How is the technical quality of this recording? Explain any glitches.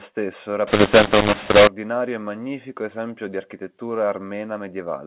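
The recording has one clear fault, set in speech carried over G.711 telephone coding, which caps the bandwidth at 4 kHz. From 0.67 to 1.67 s, just before "e magnifico esempio di", a mu-law and A-law mix-up occurs. A-law samples decoded as mu-law land on the wrong logarithmic levels, so loudness is scrambled and quiet moments fill with hiss. Unlike clipping, which only flattens peaks, this distortion scrambles every level and fills the gaps with noise.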